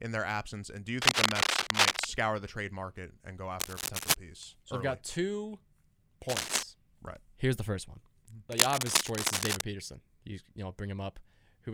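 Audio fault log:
1.02–2.06 s, 3.60–4.15 s, 6.29–6.63 s and 8.52–9.62 s: cable scratch noise. Dense, uneven crackling bursts rustle over the speech, the loudest starting after "absence and do you". A worn cable or connector being moved, changing its contact resistance, is the likely cause.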